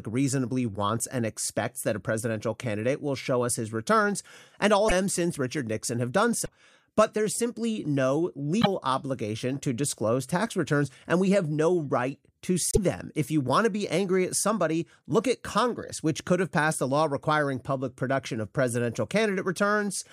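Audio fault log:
4.87–4.92 s, 6.44–6.48 s (after "have done", before "but there's simply no"), 8.61–8.67 s (after "but there's simply no", before "obligation to disclose tax"), 12.71–12.78 s (after "have no right to"): broken MP3 bit reservoir. Each is a 40 to 70 ms disturbance where the speech skips forward and briefly turns into a chirp, a burst of noise or a short hole. The likely cause is missing frames, which fits 26.1 ms MP3 frames: following frames reach back for reservoir data and decode another frame's bytes.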